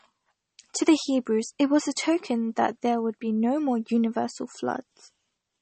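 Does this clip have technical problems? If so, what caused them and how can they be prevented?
Yes. Throughout, the speech sounds watery and swirly with nothing above 8.4 kHz, likely MP3 compression at a bitrate that fits about 32 kbps, dropping the treble and weak frequency components. Encoding at a higher bitrate, or keeping an uncompressed master, would prevent it.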